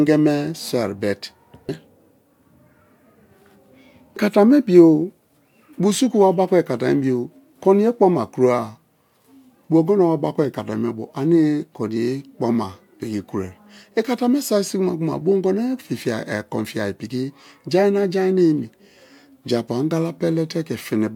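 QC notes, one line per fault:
No faults found. Nothing in the speech calls for a timed entry.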